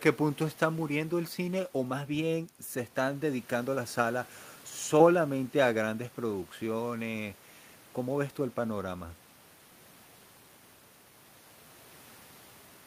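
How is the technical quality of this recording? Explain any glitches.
No glitches can be heard anywhere in this speech recording. There is nothing in it that calls for a technical explanation.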